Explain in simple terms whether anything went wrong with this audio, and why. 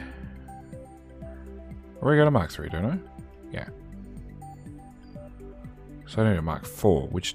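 Nothing stood out as wrong when listening to this audio, so there is no problem to point to.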